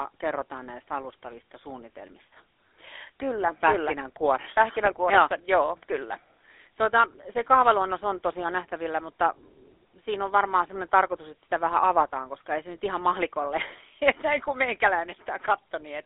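Throughout, the speech carries plainly audible GSM full-rate codec damage: buzzy, gravelly roughness from coarse pulse excitation, and a spectrogram that is empty above 3.8 kHz.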